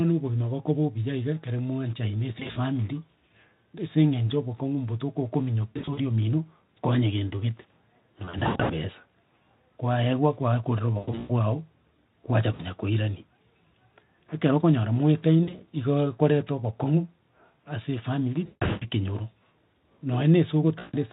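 VoIP packet loss concealed by the speech codec hits at 2.39 s (right after "obuya iga ekero mwanchaine"), 5.7, 8.25, 10.98 (after "kwaewa kwakorera"), 12.53, 15.44, 18.45 and 20.79 s. The Speex decoder papers over missing audio by stretching the last sound into a fading buzz, leaving the speech weak and smeared for a moment afterwards.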